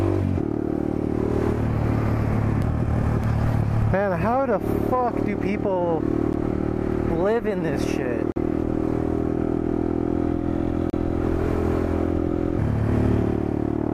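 A block of digital silence cuts the sound out at 3.24, 6.33, 8.32–8.36 and 10.90–10.93 s. The output buffer likely went unfilled, giving ticks at 3.24 and 6.33 s, a flat waveform and vertical spectrogram lines.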